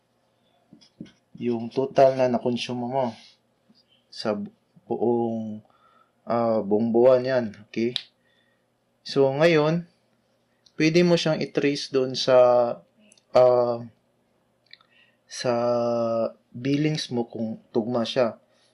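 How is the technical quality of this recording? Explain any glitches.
Nothing stood out as a glitch or technical problem when listening to this recording.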